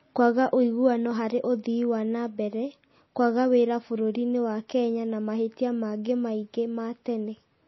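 All the way through, the speech has a hard ceiling around 5.8 kHz and a watery, swirly texture, likely MP3 compression at a low bitrate, something near 24 kbps.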